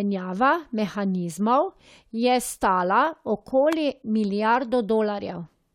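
A speech recording with a single electrical switching spike at 3.73 s, heard as a sharp snap or tight cluster of clicks sitting on top of the speech. It is likely a nearby switch, motor or static discharge arcing briefly, with the line picking up the burst as an added transient.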